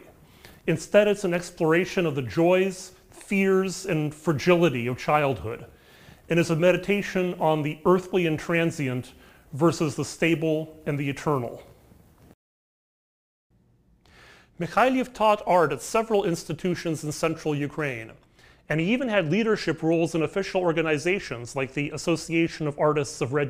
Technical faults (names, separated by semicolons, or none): crude rate conversion